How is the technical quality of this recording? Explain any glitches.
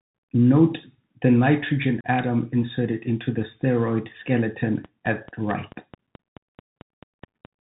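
The recording has three clear technical problems: narrowband headset coding throughout, a brief dropout near 2 s, and a run of clicks in the last few seconds.

Throughout, the speech passed through a Bluetooth CVSD headset codec, whose one-bit, adaptive-step encoding fits a 64 kbps link. Nothing above 4 kHz survives, so the speech sounds boxy and thin. Sibilants turn scratchy, loud bright sounds distort, and a grainy hiss sits underneath, all plainly audible.

From 2.01 to 2.06 s, between "the nitrogen" and "atom inserted into the", there is unconcealed Bluetooth headset packet loss. About 34 ms of audio, which points to roughly ten short voice packets, was dropped and filled with nothing. The result is a hard-edged hole.

From 4.85 to 7.46 s, a train of clicks runs at a steady 4.6 per second, around fifteen in all. They peak at about 5 dB above the speech and sound like regular ticking, continuing through the pauses. 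The likely cause is electrical interference or a struggling interface.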